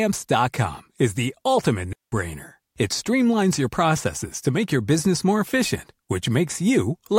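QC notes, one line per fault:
1.93–2.12 s, digital wireless dropout: the speech cuts to a clean hole of near silence lasting about 194 ms, then resumes. The receiver lost too much data from the radio link to rebuild the signal. So it muted the output rather than pass on corrupted audio. The fades in and out are very short. The gap has no burst of noise on either side, unlike an analogue link losing signal.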